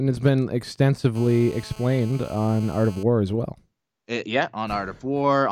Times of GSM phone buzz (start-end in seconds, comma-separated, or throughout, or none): 1.15-3.03